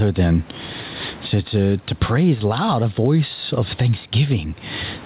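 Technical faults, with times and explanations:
throughout: gain pumping. The level ducks by around 15 dB under loud speech, flattening loud and soft parts. Unlike a noise gate, which simply cuts the background, this squashing points to likely excess microphone gain caught by a fast limiter.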